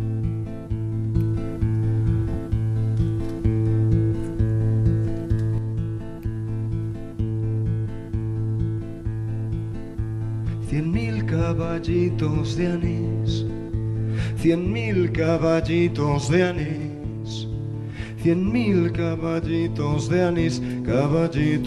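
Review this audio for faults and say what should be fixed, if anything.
At 5.58 s the level drops abruptly by about 5 dB and stays at the lower level through to the end. The sound and the background noise fall together in a single step, with no fade, which marks this as a sudden gain jump. The likely cause is a digital gain setting, or an equivalent bit shift, applied instantly between two samples rather than being ramped in. Gain changes should be smoothed over a short ramp of several milliseconds, or applied only outside active material.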